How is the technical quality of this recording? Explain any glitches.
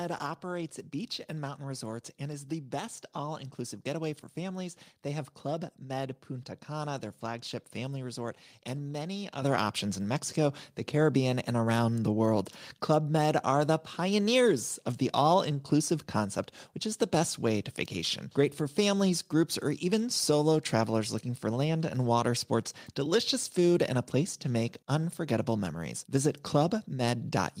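One fault: at about 9.42 s, between "family resort and many" and "options in", the microphone volume stepped up. Automatic gain control raised the input level about 7 dB at once, so voice and background jump louder together mid-phrase.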